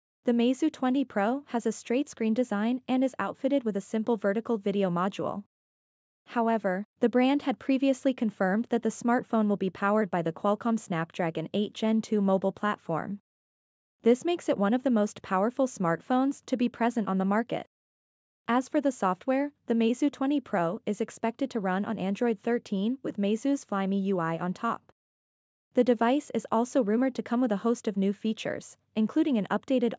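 No technical faults are audible.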